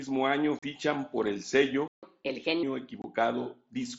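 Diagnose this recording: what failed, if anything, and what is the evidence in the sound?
Unconcealed Bluetooth headset packet loss at 0.59–0.63 s, just before "por el", and again at 3.02–3.04 s. This is a network-stage fault on the wireless link between headset and phone. The sound drops out abruptly for 37.5 ms and then 22.5 ms, with hard edges and nothing filling the holes. Those lengths fit five and three lost packets of 7.5 ms each on the mSBC wideband link. No concealment bridges the gaps.

Playback stall from 1.88 to 2.03 s, right after "por el". The output falls silent for about 151 ms in mid-flow and then resumes. This is a playback-stage fault. The player's output stopped because it ran dry, likely from a buffer underrun or a blocked audio thread, and it waited until data or scheduling recovered before producing sound again.

Catch-up at higher speed from 2.03 to 2.63 s, immediately after the stall. 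For about 0.6 s the audio runs at 1.25 times normal speed, and the pitch rises by roughly four semitones. The player is resampling its accumulated backlog to regain the 150 ms it lost. Once the buffer is back at its target level, speed and pitch drop back to normal.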